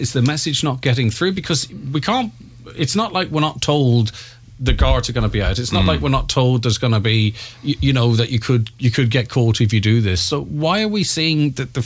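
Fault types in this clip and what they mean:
No audible faults detected.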